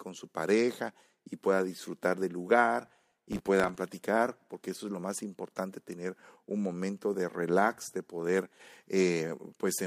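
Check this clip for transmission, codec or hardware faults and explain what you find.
One fault turns up, a burst of processor overload crackle in the speech from 2.87 to 3.76 s, between "pueda disfrutar del lugar" and "platicar porque eso es". For just under a second a gritty, tearing crackle rides on the speech, then stops cleanly. The processor fell behind and kept missing its deadlines, and each missed buffer was filled with a repeat of stale audio with hard edges. The grain fits buffers of a few milliseconds, with around thirty missed across the stretch.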